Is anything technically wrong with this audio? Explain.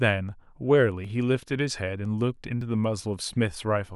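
Yes. At 1.05 s and again at 2.61 s the speech jumps abruptly, consistent with a dropped buffer (overrun). The likely cause is the recording software failing to read its input buffer before the hardware overwrote it, so a short stretch of audio, around 20 ms at the first point and roughly 10 ms at the second, is missing, and the surrounding audio is butted together with no gap of silence.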